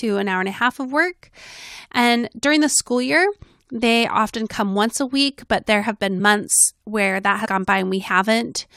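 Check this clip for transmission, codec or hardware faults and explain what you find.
Two codec faults are audible in this speech, both compressed frames skipped. At 6.19 to 6.21 s, between "week but there have" and "months where that", the decoder never played some whole compressed frames, so roughly 20 ms of speech is missing. The speech jumps ahead at the join. At 7.44 to 7.46 s, just after "months where that", a larger run of frames is lost, about a tenth of a second. The speech jumps forward at that seam too.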